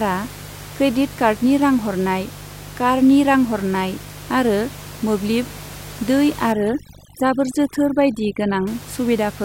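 Switching spikes from a dimmer, rectifier or unshielded line get into the signal twice per 50 Hz cycle, giving a steady, raspy mains buzz roughly 20 dB below the speech throughout. From 6.52 to 8.67 s, overdone noise removal switches frequency bands off near its noise estimate, so the background drops and breaks up into twinkling specks.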